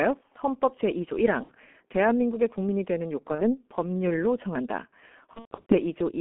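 Speech carried over the G.723.1 codec, at about 6.3 kbit/s, sounds muffled and hoarse throughout, with smeared consonants. On a spectrogram, energy sits only between roughly 200 Hz and 3.4 kHz, and formant detail looks blocky in 30 ms steps. VoIP packet loss concealed by the speech codec interrupts it three times: at 1.43–1.53 s (about 60 ms missing, fitting two lost frames), at 3.35–3.58 s (about 30 ms, one frame), and at 5.33–5.75 s, where losses scatter over 360 ms with a longest gap of 120 ms. Each time the decoder extrapolates from its last pitch and filter, so the sound is stretched into a fading buzz or coloured noise. The waveform shows the extrapolated sound shrinking in amplitude. The signal stays weakened briefly after packets resume, which is why each disturbance outlasts the lost audio.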